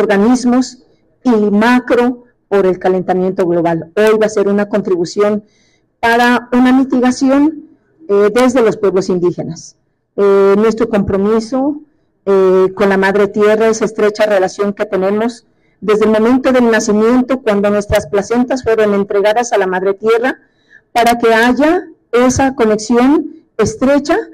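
A sum in the signal path exceeded its integer range and wrapped to the opposite sign instead of limiting, an integer overflow, giving sharp cracks at 4.07 s, 6.13 to 6.24 s, 8.39 s, 17.96 s and 20.99 to 21.43 s, harsher than clipping.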